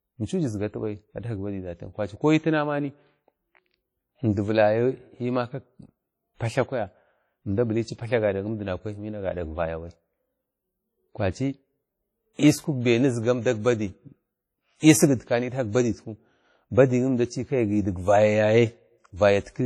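From start to finish the speech carries a ringing, washy texture and a hiss that swells and fades with the level of the voice, the signature of heavy WMA compression, most likely a first-generation WMA encoder. Its long transform blocks smear quantisation noise over tens of milliseconds, and weak spectral lines are discarded, which fits a low bitrate around 32 kbps. Content stops at about 18.2 kHz.

At 12.33 to 12.39 s a pre-echo appears: a brief hiss lasting about 55 ms arrives just before a sharp onset, and the attack itself sounds softened. The onset falls late in a transform block, so noise scaled to the loud part of the block is spread evenly across the whole block, including the quiet moment ahead of the attack.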